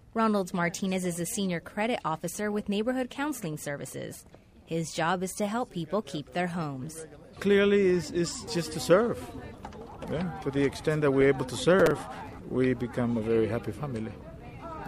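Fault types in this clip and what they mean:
processor overload crackle: The processor falls behind and cannot fill each small audio buffer before it is due. Here that happens from 11.80 to 12.39 s. Buffers of about 5 ms are missed again and again, around thirty of them. Each miss replays a short scrap of old audio with hard edges. Together they form a gritty burst of crackle laid over the sound. It stops once the load eases.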